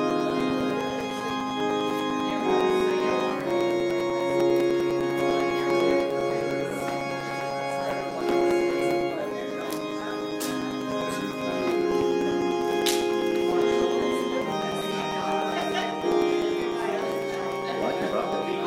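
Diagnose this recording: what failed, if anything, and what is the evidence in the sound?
The failure is periodic USB or driver dropouts at the driver or buffer stage. From 0.10 s to 18.53 s, regular ticks recur every 0.1 s, around two hundred in all. Each time, something blocks the audio path and a few milliseconds of signal are replaced by silence.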